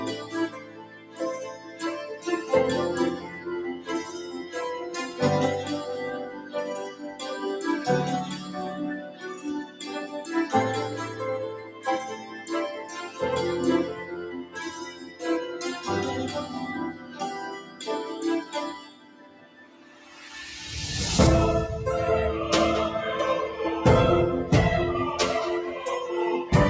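A speech-tuned noise suppressor left running on non-speech audio treats steady tones and decaying tails as noise, so level swings of around 15 dB pump and flutter throughout while attacks pass intact. Unlike a compressor, which reacts to loudness, it reacts to steadiness. Sound cut by the noise suppressor sinks hardest at 0.18–2.27, 3.22–4.55, 6.31–7.21, 8.46–9.85, 11.64–13.2, 14.0–15.22, 16.93–17.83 and 18.45–20.27 s, dropping about 8 to 10 dB as held sounds fade. Unlike a dropout, these dips are never silent. The bandwidth, topping out at 8 kHz from call microphone processing, is expected.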